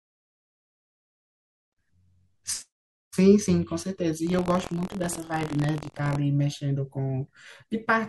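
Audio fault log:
4.25–6.17 s, buffer tearing: a steady robotic buzz at about 43.1 Hz rides the speech, heard only while sound is present. Writer and reader have slipped, so a small slice of each period, a few percent, repeats audio from roughly a tenth of a second earlier, which fits a 1024-sample buffer.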